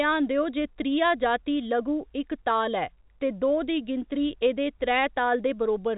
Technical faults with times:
none

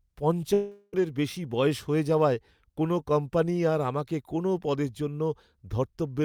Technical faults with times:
0.53-0.95 long network dropout

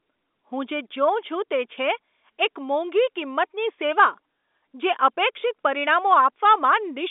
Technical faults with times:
none

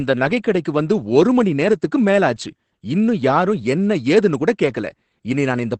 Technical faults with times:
0.00-5.79 Opus voice compression

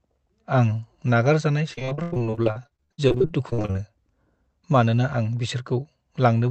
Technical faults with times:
1.73-3.81 repeated packet loss (robotic sound)

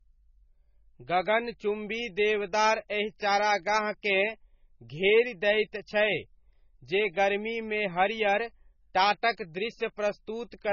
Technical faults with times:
0.00-10.72 MP3 compression

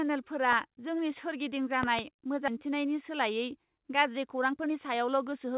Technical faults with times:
1.83-2.01 loud pop
2.48-2.50 skip ahead
4.17-5.54 jitter buffer speed-up

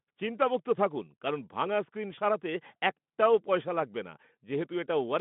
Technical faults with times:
2.15-2.19 VoIP packet loss concealed by the speech codec

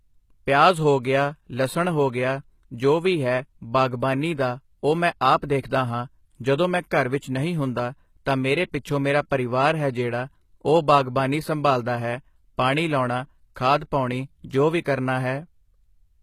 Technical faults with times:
0.00-16.22 HE-AAC compression
14.81-14.86 pre-echo

